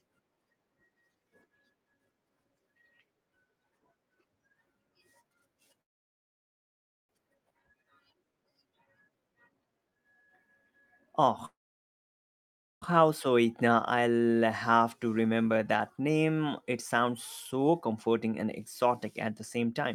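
At 5.81 s the speech stops dead. This is a call audio freeze. The last sound carries on only very briefly, then about 1.27 s of silence follows. Speech resumes at 7.11 s exactly where it left off. Nothing is lost, but the stream now runs about 1.28 s late. The likely cause is packets held up in transit, leaving the jitter buffer empty.

At 7.49 s comes a skip ahead. Playback jumps forward, bridged by only 13 ms of filler. Roughly a second of speech is gone, and the two sides are butted together almost directly. The late audio was already queued, so it was discarded to catch up.

From 7.63 s to 11.26 s there is a jitter buffer slow-down. The speech plays at 91% speed with unchanged pitch. Sounds are drawn out, and 331 ms in total is added. The receiver repeats single pitch periods and bits of pauses again and again to rebuild its reserve.

A second call audio freeze starts at 11.45 s. Again the sound holds for a moment, then falls to about 1.3 s of silence. 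At 12.84 s the speech returns with "so it now", picking up where it stopped. Nothing is missing, but the delay grows by about 1.36 s. Delayed packets likely starved the buffer again.

From 17.54 s to 19.93 s comes a jitter buffer speed-up. The speech runs at 106% speed, still at the same pitch, and sounds slightly hurried. Roughly 150 ms is cut out in short pieces of one or a few pitch periods. The buffer held more audio than its target, and the receiver was trimming the excess delay.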